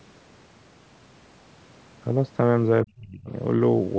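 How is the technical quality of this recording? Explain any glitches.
One glitch stands out near the end of the recording, heard through call microphone processing that leaves nothing above 8 kHz. From 2.85 to 3.32 s, the speech is suppressed in double talk. The speech dips sharply, by about 30 dB at its deepest, and breaks up for just under half a second. The likely cause is an echo canceller mistaking the talker for far-end echo while both sides spoke. On a waveform the envelope collapses abruptly, and a spectrogram shows the energy thinning to gaps.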